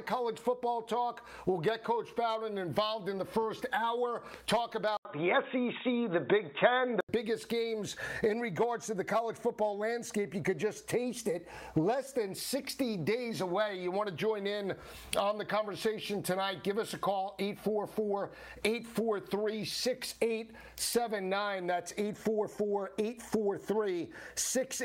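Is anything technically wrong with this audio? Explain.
Yes. From 4.97 to 7.09 s, after a brief gap of about 80 ms, the sound turns dull and boxy, with nothing above 3.8 kHz, a level shift of roughly 5 dB and a faint new noise floor. This is likely an input switched to a poorer device, whose narrower band and different tone and level replace the original microphone until the switch back.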